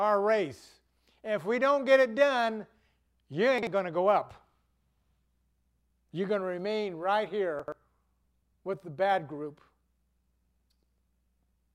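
A speech recording with two short stretches of chunks out of order, at 3.58 to 3.67 s and 7.60 to 7.72 s. Blocks of about 43 ms play in the wrong sequence. The first block lands one chunk late and the second two chunks late. Nothing is missing, but each spot sounds briefly jumbled, with three hard joins. On a spectrogram, formant tracks break and jump back, and the waveform shows abrupt steps at the seams.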